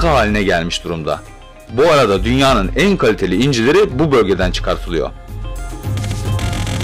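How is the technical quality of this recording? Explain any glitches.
The recording is marred by hard clipping that runs through the whole clip. The level reaching some stage was about 12 dB beyond what it could pass, so every peak is sliced flat, with about 7 percent of the samples stuck at the ceiling. Those squared-off tops add high harmonics, heard as a harsh fuzz on every loud moment. Unlike gentle tape-style saturation, the distortion cuts in abruptly at peaks and leaves quieter passages clean.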